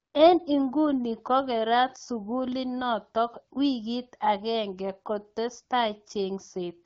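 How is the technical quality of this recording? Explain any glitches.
No glitches can be heard in this speech recording, which comes through the AMR wideband (HD Voice) codec at 12.65 kbit/s, a rate at which the coding leaves only light traces on the signal.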